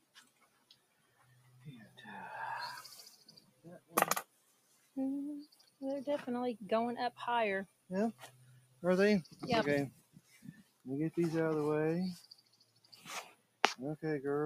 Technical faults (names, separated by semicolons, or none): noise suppressor applied to music or sounds; sound cut by the noise suppressor